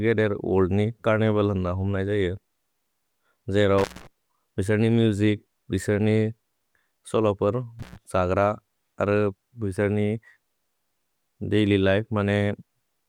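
A speech clip where intermittent contact, a loose connection briefly opening, cuts the sound with edge crackle at 3.78 s (about 169 ms, before "विसर् नि") and at 7.79 s (about 106 ms).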